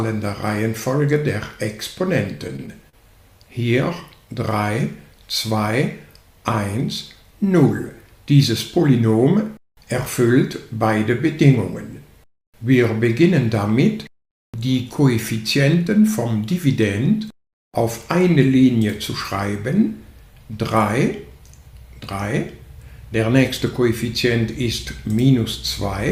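Repeated stalls (stutter) affect the audio from 2.47 to 2.95 s. Packets arrived late, so the jitter buffer ran dry four times. The receiver stretched the last sound over each gap, the longest 40 ms. About 78 ms was filled this way. Nothing is lost, but the passage hitches and drags. A jitter buffer slow-down follows from 4.28 to 4.65 s. The buffer was short of reserve, so it repeated tiny stretches of the signal. This added 36 ms. Playback ran at 93% speed with unchanged pitch, so sounds are slightly drawn out.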